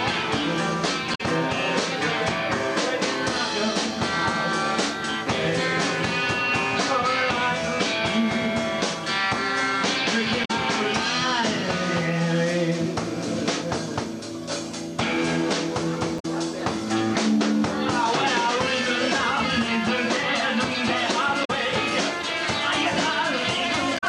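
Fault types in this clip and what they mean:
Damaged data in a compressed stream: five brief glitches, each lasting about 0.1 s, break into the sound at 1.11, 10.41, 16.16, 21.41 and 23.94 s, heard as short chirps or blips. They come from corrupted stretches of the compressed data, where bytes were lost, zeroed or overwritten. The decoder cannot read those frames correctly, loses its place in the stream and has to hunt for the next valid frame header before normal playback resumes.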